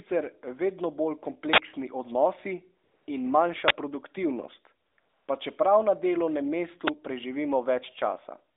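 From 1.53 to 1.58 s an uninitialised buffer plays: a 46 ms burst of loud digital noise, which fits a 2048-sample block output before audio was written. AMR comfort noise then replaces the narrowband phone background from 2.84 to 3.08 s, 4.86 to 4.98 s and 5.00 to 5.28 s. Speech frames stopped, and the receiver substituted smooth synthetic noise that switches in and out. Further uninitialised-buffer bursts occur from 3.68 to 3.70 s, lasting 23 ms and fitting a 1024-sample block, and at 6.87 s, a 12 ms burst fitting a 512-sample block.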